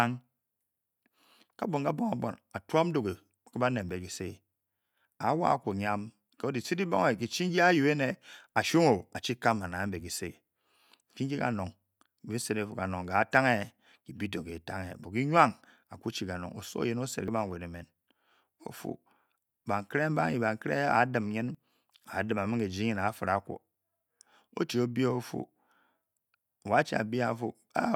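At 3.89, 17.28 and 21.55 s the speech jumps ahead, most likely a dropped buffer (overrun): about 10 ms, then about 30 ms twice, was overwritten before being read. The waveform shows an abrupt splice with no gap, and the spectrogram a thin vertical broadband line.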